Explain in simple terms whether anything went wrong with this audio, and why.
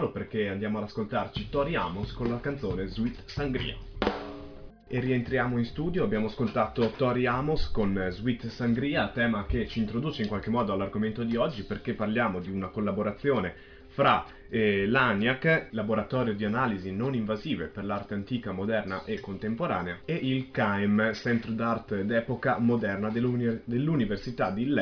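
Nothing went wrong with it.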